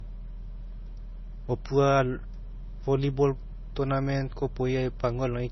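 Throughout the speech, nothing is present above about 5.9 kHz, so sibilants and consonant edges are dull and band-limited, with the swirly, smeared texture of heavy MP3 coding on top. This is likely low-bitrate audio saved at a high bitrate: the sound points to an MP3 encode at roughly 24 kbit/s that was later re-encoded as MP3 at around 256 kbit/s. The larger second file keeps the first encoder's cut-off and artefacts and cannot restore what was discarded.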